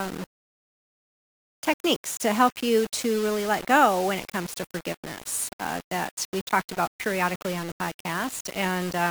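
Low bit depth without dither runs through the whole clip: the speech sounds likely rounded to about 5 bits with no dither, so the error tracks the voice, producing grainy, level-dependent distortion roughly 15 dB below it, while the quietest passages crumble or sputter toward silence.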